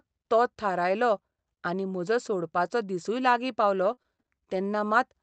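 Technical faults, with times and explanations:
3.63–4.54 s, repeated packet loss (robotic sound): right after "म्हजो सोडपाचो दिसूय लागीं", packets dropped five times, with the longest gap 32 ms. Each hole was patched by extending the previous sound, so this stretch of speech turns choppy, with pieces missing.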